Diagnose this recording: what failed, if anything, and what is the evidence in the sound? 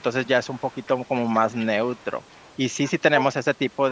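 Overdone noise removal runs through the whole recording. It happens at the call processing stage. The background drops, with small twinkling specks where the noise floor used to be. The suppressor was set too hard. It pulls individual frequency bands down whenever they come close to its noise estimate. Quiet parts of the speech fall below that line and get cut along with the noise.

An echo leak appears as a faint delayed copy of the voice, trailing about 241 ms behind. It shows up from 0.44 to 1.15 s, 1.34 to 1.66 s, 1.85 to 2.05 s, 2.24 to 2.55 s and 2.85 to 2.91 s. It is strongest around 1.4 s and 2.9 s and very faint near 2.3 s. The likely cause is a loudspeaker on one end, with its echo canceller letting some of its own playback through.

Speech is briefly suppressed in double talk from 3.15 to 3.23 s. The voice dips for well under a tenth of a second, by roughly 5 dB at its deepest. 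The likely stage is the echo canceller, during a moment when both sides were active. It could not separate the local talker from the loudspeaker echo, so it turned both down. The call microphone processing's band limit, with nothing above 8 kHz, plays no part in this dip.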